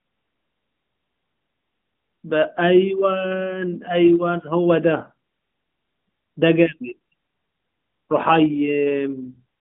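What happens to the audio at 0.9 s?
At 0.9 s the speech is intact, with no fault, and it simply carries the narrow mobile-phone band of the AMR narrowband mobile codec running at 12.2 kbps.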